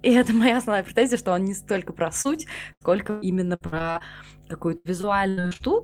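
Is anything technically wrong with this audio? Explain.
Yes. Mains hum runs through the whole speech clip. It is a steady low tone at 50 Hz, roughly 20 dB below the speech. A ground loop or nearby transformer is leaking the power line into the signal. It sits under everything, never stopping.

Repeated packet loss, giving a robotic sound, hits twice. The first stretch runs from 2.21 to 4.02 s, right after "он не столько про", with ten holes, the longest 118 ms. The second runs from 4.77 to 5.73 s, with eight holes, the longest 78 ms. Each hole is patched by stretching the last sound, so the speech turns choppy, with pieces missing.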